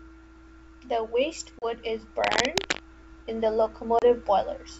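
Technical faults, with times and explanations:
1.59 s and 3.99 s: packet loss on an ADPCM call. Each time about 30 ms of the speech drops out into a hard-edged gap of silence, which points to roughly three lost packets. The second comes just after "in the". The receiving decoder's adaptive predictor and step size no longer match the sender's. So the speech resumes slightly distorted. It recovers within tens of milliseconds as the decoder readapts.
2.22 to 2.83 s: cable scratch noise. A dense, irregular burst of scratching and rustling sits over the speech for about 0.6 s, ending just before "in the". It is about as loud as the speech itself. The likely cause is a worn cable, connector or control being moved. Its contact resistance then fluctuates rapidly, and those jumps reach the signal as ragged bursts of noise. The G.722 wideband coding underneath adds at most a faint upper-band hiss.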